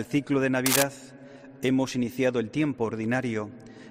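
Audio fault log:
0.66–0.83 s, cable scratch noise: a brief patch of dense, ragged crackle rides over the sound, a bit louder than the audio itself. That's likely a worn cable or connector getting nudged, its contact resistance flickering and spraying uneven noise into the signal.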